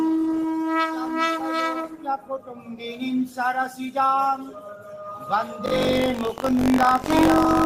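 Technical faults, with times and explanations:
Throughout, a noise suppressor applied to music or sounds: it treats held tones and tails as noise, so the level swings by around 10 dB and the sound pumps.
0.5–0.72 s, 0.89–1.18 s and 1.73–2.76 s, sound cut by the noise suppressor: steady parts sink by about 4, 6 and 8 dB as the suppressor clamps down harder.
5.65–7.65 s, buffer tearing: the write and read positions crossed, so every period replays audio around 70 ms old, giving a 46.9 Hz rattle that fits a 1024-sample buffer.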